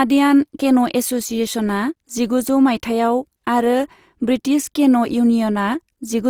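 Speech throughout, with a rough, grainy, noisy texture laid over it, which is likely Opus compression in its music (CELT) mode. The damage is plainly audible and fits a rate near 24 kbps. On a spectrogram, energy reaches about 20.2 kHz with few spectral holes, but bands look speckled and noise-filled rather than cleanly harmonic.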